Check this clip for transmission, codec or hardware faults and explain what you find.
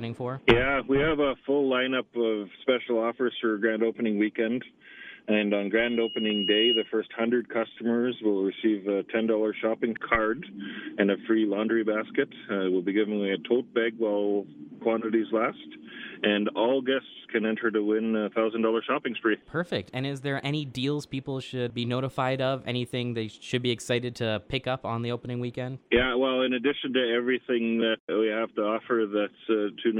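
One fault is present, a loudspeaker feedback squeal from 5.75 s to 6.92 s. A microphone is picking up the loudspeaker it feeds, and at about 2.9 kHz the loop gain tips past unity, so that frequency feeds on itself. A pure tone swells over roughly a second until it sits about 5 dB above the surrounding sound, then stops. On a spectrogram it is a thin horizontal line at 2.9 kHz that brightens as it grows. On the waveform the envelope rises steadily through the same span.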